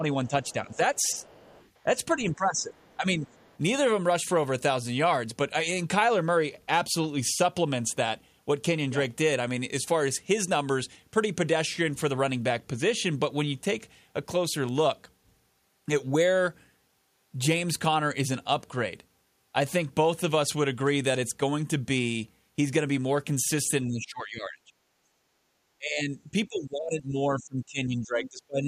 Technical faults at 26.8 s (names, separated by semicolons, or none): speech suppressed in double talk